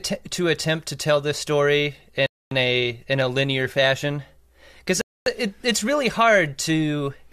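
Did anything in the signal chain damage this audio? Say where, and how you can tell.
Yes, there's a gap between chunks, from how the audio was stored or played back in 2.5 s blocks. After "to tell this story" the sound drops out from 2.26 to 2.51 s, and again from 5.01 to 5.26 s, just before "it it's really hard". Each hole is 250 ms of hard-edged silence inserted at a block join, so nothing's missing, just pushed later.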